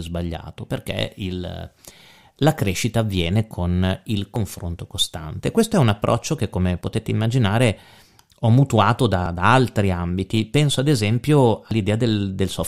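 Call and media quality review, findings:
Audio missing between chunks: abrupt skips at 4.36, 6.81, 9.26 s (between "ho mutuato" and "da altri ambiti") and 11.71 s, about 50 ms lost each. Regular 2.5 s spacing, likely chunked capture dropping audio at each handover. Sides spliced directly, no silent gap, unlike a dropout.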